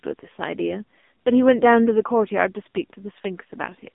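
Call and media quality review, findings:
AMR narrowband mobile codec, whole clip: band 200 Hz–3.6 kHz, nothing above 3.7 kHz, plus buzzy, synthetic voicing from heavy coding, fitting a low 5.9 kbps mode, unlike a plain band-limit.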